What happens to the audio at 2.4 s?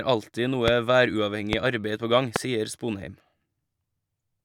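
A loud pop from 2.36 to 2.38 s, likely a voltage spike from a switch or static, cracks roughly 20 dB above the speech: a tall waveform spike, a thin full-height spectrogram stripe.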